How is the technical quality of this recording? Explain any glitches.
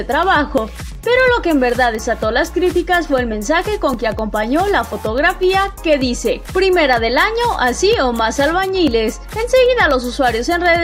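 The recording has two problems, one steady and one occasional.

First, periodic USB or driver dropouts run from about 0.23 s to 10.66 s. Every 0.25 s a tiny sliver of audio, a fraction of a millisecond, drops out to silence. That's around forty small ticks in a steady rhythm, and you only hear them while there's signal. The evenly spaced timing points to a background task briefly blocking the USB bus or the audio driver on a fixed schedule.

Second, there are three separate jumps at 0.58 s, 3.94 s and 8.88 s. Each one is an abrupt skip forward with no silence in the gap. The first loses roughly 30 ms, the second about 10 ms and the third around 20 ms. The likely cause is a dropped buffer (overrun): the software didn't collect its samples in time, the hardware overwrote them, and the audio on either side was butted straight together.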